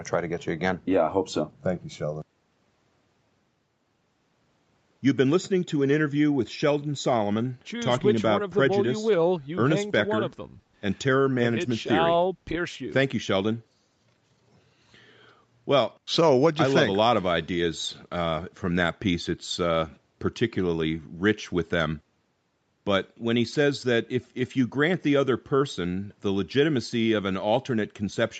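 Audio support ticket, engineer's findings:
No faults found in this speech recording.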